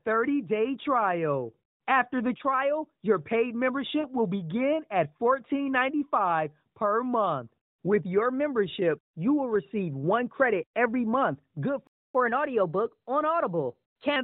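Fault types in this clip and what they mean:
Lost AMR speech frames: A brief warbling dip at about 4.0 s, between "the trial your paid" and "will begin at", lasting roughly 40 ms. Radio errors corrupted what sounds like two 20 ms frames, so the narrowband decoder stretched its last good pitch and vocal tract settings with falling gain.
Playback stall: The sound stops dead mid-flow at about 11.87 s, just after "credit every month good", and stays silent for about 0.27 s before resuming. The player was likely starved of data or had its output thread blocked, so nothing reached the output.
Catch-up at higher speed: From about 12.15 s to 14.16 s the audio runs 1.1 times fast, with pitch raised by roughly a semitone and a half. The player is resampling its backlog to recover the time lost in the stall.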